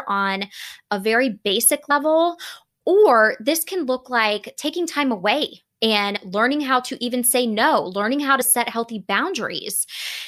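Compressed frames skipped at 1.90 s, 6.15 to 6.17 s (between "like taking time away" and "learning how to even") and 8.40 s (between "say no learning how" and "set healthy"). The decoder drops one or two frames, which fits 26 ms frames, so the speech jumps ahead by roughly 30 to 50 ms. Because neighbouring frames overlap, each join is a brief smeared blip rather than a hard click.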